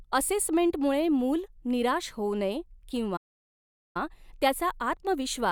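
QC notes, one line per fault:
3.16–3.97 s, playback stall: the player likely ran out of buffered data or had its output thread blocked, so nothing reached the output for 0.78 s. The speech cuts off mid-flow into a clean silence, then carries on once playback recovers.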